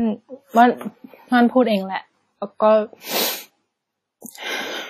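WMA compression runs through the whole speech recording, and it is likely the cause of the ringing, washy texture heard from start to finish. Windows Media Audio codes each stretch of sound in blocks of frequency data, and when bits run short, weaker components are simply dropped while the rest are coarsely rounded. Here the damage is heavy, which fits a bitrate around 32 kbps: a hiss swells and fades with the signal, and nothing survives above 16.3 kHz.

Pre-echo appears from 4.21 to 4.26 s, a short hiss arriving just ahead of a sharp onset and smeared across about 53 ms. The encoder sized its rounding noise for the loud attack but spread it over the entire block, so the quiet moment before the onset is filled with that noise too. The attack therefore sounds softened, as if the sound leaks in slightly early.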